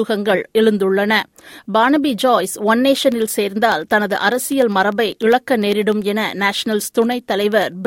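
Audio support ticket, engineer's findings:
Periodic USB or driver dropouts, 3.02–7.72 s: ticks every 0.1 s, sub-millisecond silent gaps. Bus or driver stalling on a timer.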